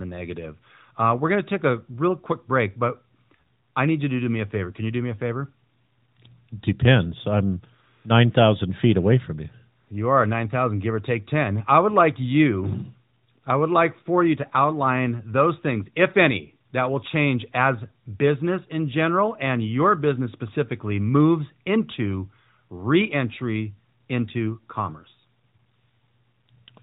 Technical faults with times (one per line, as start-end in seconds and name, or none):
none